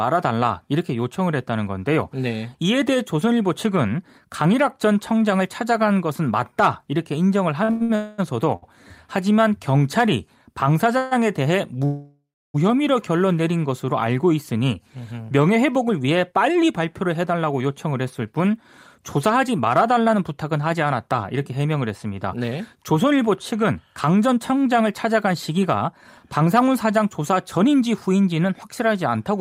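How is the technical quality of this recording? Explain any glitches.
The recording has several network-related glitches. It stalls and stutters around 8 seconds, freezes three times between 8 and 12.6 s, and runs hurried in the second half.

Repeated stalls (stutter), 7.63–8.64 s: the sound halts four times, the longest hold about 101 ms, with roughly 278 ms of extended sound in total. Packets arrived late, so the jitter buffer kept emptying and the receiver stretched the last sound each time. The result drags and stutters.

Call audio freeze, at 7.95–8.20 s, 10.97–11.13 s and 11.85–12.56 s: the audio hangs as a sustained, fading buzz for 227 ms, 138 ms and 688 ms. The last one decays into about 300 ms of silence before resuming exactly where it stopped. The likely cause is packets held up in transit, draining the jitter buffer.

Jitter buffer speed-up, 15.68–28.33 s: the audio plays about 7% fast at unchanged pitch, trimming roughly a second overall. 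The buffer held too much audio, so the receiver cut many short pitch-period slices to catch up. The effect sounds rushed.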